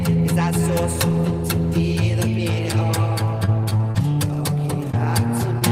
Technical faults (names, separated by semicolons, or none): repeated packet loss (robotic sound); short concealed packet loss